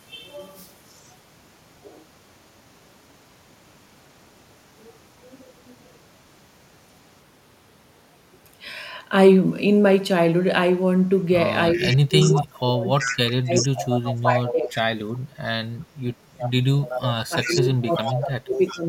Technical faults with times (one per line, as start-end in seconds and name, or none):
0.88-1.15 echo leak
11.74-12.44 echo leak
11.75-14.76 speech suppressed in double talk
12.98-14.79 echo leak
16.38-18.78 echo leak
17.29-18.89 speech suppressed in double talk